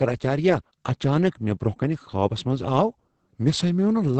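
Opus voice compression runs throughout the clip. The SILK linear-prediction coder holds the speech to a band topping out near 8 kHz and codes its excitation coarsely, which fits a low bitrate around 10 kbps. The heavy damage leaves the speech muffled, hoarse and slightly robotic.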